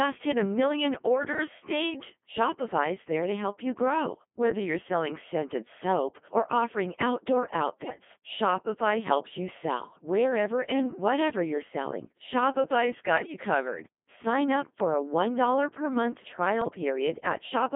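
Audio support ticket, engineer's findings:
Codec 2 vocoder across whole clip, heavy damage. Voice path reduced to pitch, voicing, energy and spectral envelope, then resynthesised from sine waves; original waveform gone. Result: robotic, buzzy speech in a narrow 200 Hz to 3.5 kHz band, consistent with the 2.4 kbit/s mode. Anything besides a single voice comes out smeared.

Bit errors on digital voice radio at 7.84–8.00 s, 13.18–13.34 s and 16.62–16.75 s. Corrupted bits reaching the low-rate decoder, error rate a few percent, worst at 13.18 s. Each bad bit skews pitch, level, voicing or spectrum for a whole frame, so the synthetic voice lurches in pitch and loudness and breaks into short bleeps and warbling gibberish, each burst spanning a handful of frames.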